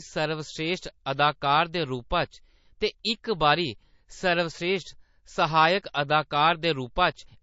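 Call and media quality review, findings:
Encoder starved of bits, likely MP3 compression at a low rate, consistent with around 32 kbps. Present throughout the speech. Hard treble cutoff with nothing above 7.6 kHz, so s sounds lose their edge. Weak frequency lines switch on and off between frames, giving a plainly audible watery, swirling texture. Consonant attacks smeared.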